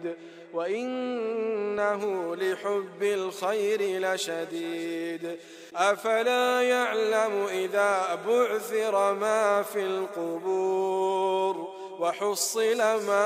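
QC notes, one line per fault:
0.0 to 2.0 s: de-emphasis applied wrongly. A treble cut meant to reverse pre-emphasis hit audio that never had it, or was applied twice. The top end slopes away smoothly, about 14 dB down at 10 kHz against 1 kHz. So the opening sounds dull and muffled.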